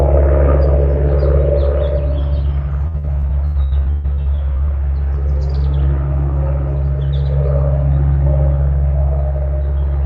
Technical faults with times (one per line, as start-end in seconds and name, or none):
2.87-4.70 repeated packet loss (robotic sound)